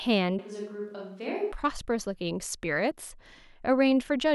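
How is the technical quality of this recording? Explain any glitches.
The recording has one noticeable glitch. From 0.39 to 1.52 s the speech abruptly turns hollow and roomy, about 10 dB quieter, with room noise roughly 40 dB down. That is likely a switch to a distant microphone. A waveform shows a sudden smaller envelope, and a spectrogram shows weaker bass and smeared reverberant tails.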